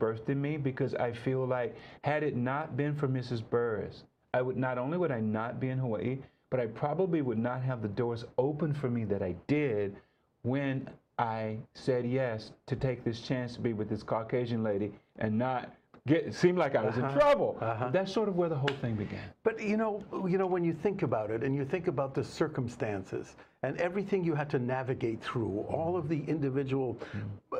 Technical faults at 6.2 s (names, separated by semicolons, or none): none